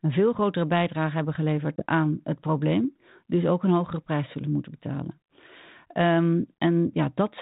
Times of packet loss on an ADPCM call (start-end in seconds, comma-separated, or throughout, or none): 1.76-1.84